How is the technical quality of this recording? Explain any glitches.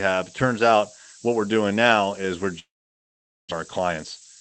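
The technical quality is poor, with a harsh hiss throughout, a long gap near the end, and a hurried final stretch.

Throughout, a thin, bright hiss sits nearly as loud as the speech. This is low bit depth with noise shaping: the sound fits about 6 bits, and the rounding error is pushed up toward the top of the band. That band stops around 8 kHz, consistent with a call codec such as Opus running near 20 kbps.

From 2.59 to 3.53 s, just after "doing now is we're", the sound smears into a fading buzz and then goes silent. Speech resumes with about 0.7 s missing, most likely from a long network dropout.

From 3.65 to 4.37 s, speech runs about 10% fast at unchanged pitch. This is a jitter buffer speed-up: short pitch-period slices, roughly 70 ms in total, are trimmed to cut the delay built up after the gap.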